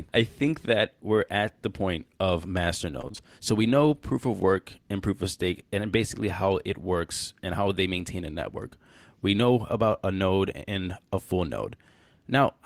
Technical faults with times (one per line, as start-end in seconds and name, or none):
3.01-3.20 repeated packet loss (robotic sound)